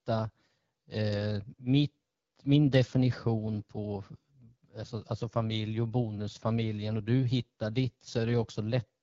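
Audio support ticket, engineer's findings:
Speech path through AMR wideband (HD Voice) codec, low rate, sounds like about 8.85 kbit/s. Throughout: rough, raspy speech, coarse pulse-model coding, noise-filled top band above 6.4 kHz.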